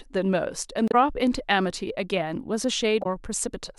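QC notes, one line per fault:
0.88–0.95 s and 2.99–3.06 s, damaged data in a compressed stream: two short garbled bursts, each about 70 ms, cutting across the speech. Some of the compressed data was wrong there, so the decoder misread those frames, lost its place in the stream and had to hunt for the next valid frame header before it could resume. That stretch comes out as a brief chirp, squawk, click or short hole instead of the speech that belongs there.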